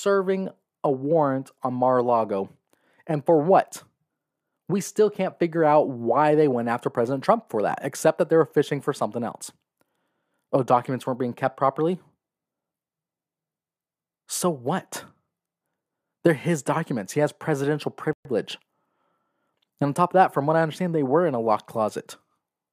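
At 18.13 s, just after "has presidential", the speech drops out into silence. The gap lasts 120 ms and ends at 18.25 s. This is a playback stall. The sound stops mid-flow and then picks up again. The likely cause is that the player ran short of data or its output thread was held up, so nothing reached the output until it recovered. It is heard as a brief, unnatural hole in the speech.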